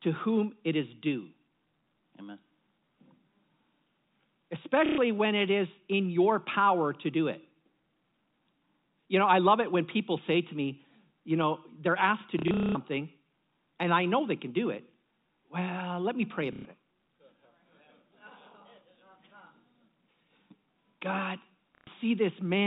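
Speech over G.711 telephone coding, band-limited below 4 kHz, with packet loss with last packet repeated at 4.86–4.98, 12.39–12.75 (scattered, longest run 210 ms), 16.53–16.65 and 21.75–21.87 s. Each gap becomes a robotic stutter, fitting 30 ms packets replayed. A spectrogram shows frozen, repeating frames.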